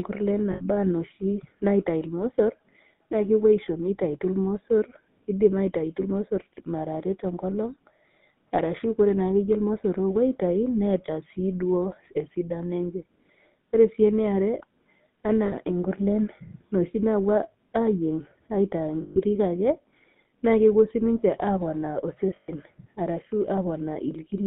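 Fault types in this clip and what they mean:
GSM full-rate codec: speech sits in a narrow 150 Hz to 3.7 kHz band with buzzy, gravelly roughness; spectrogram shows nothing above about 3.7 kHz and coarse, pulse-driven harmonics.
Lost GSM frames: gaps of 60 to 140 ms filled with a held, metallic ring; spectrogram shows frozen, repeated spectral slices, near 0.52, 15.46, 19.02 and 22.36 s.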